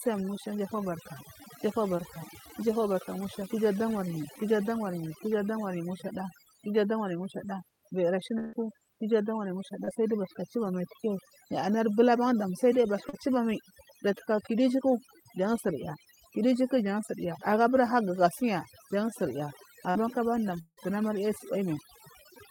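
Heavy noise reduction runs through the whole speech clip, a case of overdone noise removal. Frequency bands sitting near the tool's noise estimate are pushed down or switched off, taking quiet parts of the voice with them. The pauses fall to near silence with twinkling specks. On a spectrogram the background is almost black, scattered with isolated bright dots, and the speech shows ragged, gappy edges.

At 1.97 s there is a short concealed packet loss. About 20 ms of audio never arrived, and the receiver covered 12 ms by extending the preceding sound before blending back in. It is heard as a tiny smear. A spectrogram shows a brief blurred strip with the preceding sound stretched flat.

After "kiju adamaryi mushada viyiri", from 8.39 to 8.55 s, comes a burst of packet loss. About 140 ms went missing, and concealment filled 142 ms with no silence. The last sound is continued and fades, so it comes across as a held buzz or hiss that dies away before the speech resumes further on. 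On a spectrogram, the frozen continuation thins out over that stretch, and the waveform envelope tapers smoothly instead of following syllables.

Further short concealed losses fall at 9.85–9.89 s, just before "sai giyu bathuka chubamai", with about 20 ms missing and 24 ms filled. Another sits at 13.09–13.15 s, between "ban dam sal duya" and "chubamai jataka kudu ijuku", and a third at 19.91–19.97 s. In the last two, about 40 ms is missing and 37 and 41 ms are filled. Each is a brief smear or wobble.

From 20.61 to 20.79 s the sound is held as a fading buzz or hiss for 159 ms, then about 50 ms of silence follows. Around 160 ms is lost before the speech resumes further on. This is likely a long network dropout. It appears as a flat, decaying band on the spectrogram, then a blank gap in the waveform.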